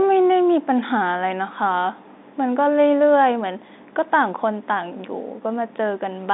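No technical faults occur at any point in the speech.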